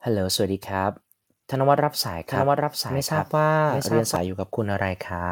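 Short speech recording, and from 2.28 s to 4.16 s there's a doubled audio track: a dry, full-band copy trails roughly 0.7 s behind at about equal level, cutting in and out abruptly. Likely a slower second capture path got mixed in.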